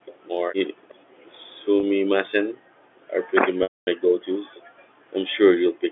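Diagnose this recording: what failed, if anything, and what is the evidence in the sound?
The echo canceller at the call-processing stage gated the background from 0.00 to 3.07 s and again from 4.00 to 5.91 s. The room sound drops by about 40 dB, for roughly a second and a half in the first stretch and well under a second in the second, and comes back when the canceller releases. Unlike a network loss, the voice keeps going while the ambience underneath it dips, and nothing buzzy or repeated fills the holes.

An echo leak runs from 0.07 to 1.69 s and shows up briefly again at 4.55 to 4.61 s. A faint copy of the speech, about 30 dB below it, trails 366 ms behind. The likely cause is the far end's loudspeaker audio reaching its microphone and getting past an echo canceller that did not fully converge. Room reverberation would smear the sound continuously, whereas this is a single discrete delayed copy.

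Packet loss with pitch repetition occurs twice on the network path. At 1.80 s a 30 ms gap, which fits a single lost packet, is bridged by a repeated pitch period and heard as a slightly held, buzzy tone. From 3.63 to 3.87 s a 240 ms gap, which fits a run of consecutive packets, starts with that same buzz, fades to silence, and cross-fades back into the speech. The repeated pitch cycle sets this apart from gating or suppression, both of which only lower the level.

At 4.43 to 4.49 s the speech itself drops out for around 70 ms, by around 40 dB. This is likely speech suppressed in double talk: with both ends active, the echo canceller could not separate the near talker from the loudspeaker echo and attenuated everything. The sound drops instead of being held or looped as concealment would, and it affects the voice directly where the gating affected only the background.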